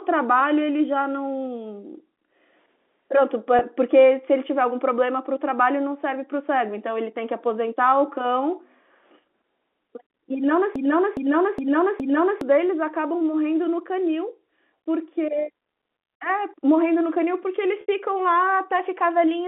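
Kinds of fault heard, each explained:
Packet loss with pitch repetition: the receiver fills the missing audio by repeating the last pitch period. At 3.59 s, a 20 ms gap just sounds like a briefly held, buzzy note. At 17.81 s, the 70 ms gap runs long enough to fade toward silence.
Broken-record loop: from 10.76 to 12.41 s, a 0.41 s piece plays four times back to back, identical each time, and the sound that belonged there is gone. That points to a player or stream that likely stalled and kept resending its last fragment.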